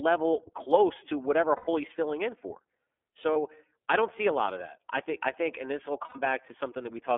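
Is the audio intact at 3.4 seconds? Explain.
No. The whole clip carries plainly audible iLBC codec damage. The speech is squeezed into a telephone band of roughly 300 Hz to 3.4 kHz, with a slightly rough, synthetic edge. The 30 ms framing points to the 13.33 kbps mode. This differs from a simple band-limiting filter: the coder rebuilds the excitation frame by frame, so the grain comes from the coding itself and not just from missing highs.

Just before the asked moment, from 3.33 to 3.36 s, there are lost iLBC frames, about one 30 ms frame's worth. The decoder covers the hole by repeating the last pitch cycle blended with noise, so the gap sounds like a brief held, faintly buzzy vowel, not silence or a click. Unlike concealment in codecs that carry state across frames, the voice is clean again almost immediately. By 3.4 s only the codec colouring remains.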